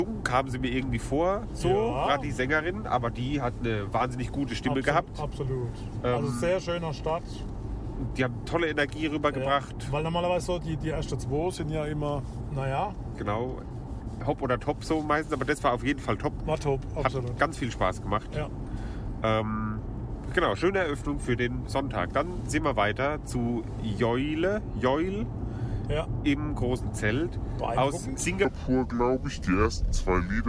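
A wrong sample rate fault starts at 28.45 s and runs to the end of the clip at 30.48 s. In this stretch the samples are played back more slowly than they were captured, with no rate conversion, so time and pitch are stretched together. Everything runs at about 0.69 times normal speed and drops by about 6.45 semitones, making the sound low, sluggish and dull. That ratio fits 32 kHz material being played out at 22 kHz.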